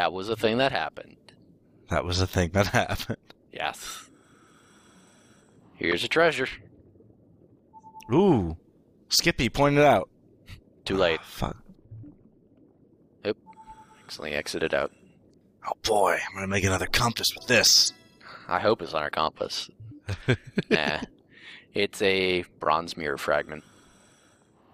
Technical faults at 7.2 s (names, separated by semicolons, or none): none